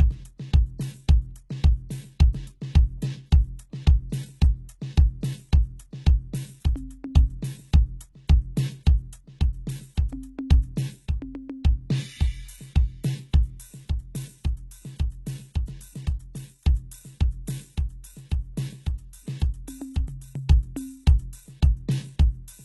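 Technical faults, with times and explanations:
Throughout: HE-AAC compression, heavy. The treble sounds synthetic, gritty and metallic, and nothing reaches above about 11.8 kHz. This is likely spectral band replication copying lower bands upward at a very low bitrate near 16 kbps, so upper harmonics misalign with the music below.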